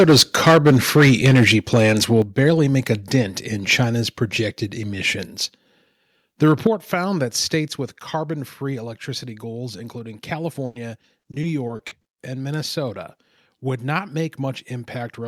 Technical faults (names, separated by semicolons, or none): microphone overload; microphone volume stepped down; repeated packet loss (robotic sound)